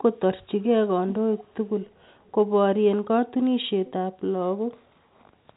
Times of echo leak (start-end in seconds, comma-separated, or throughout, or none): 0.61-0.65, 1.37-2.32, 3.86-3.92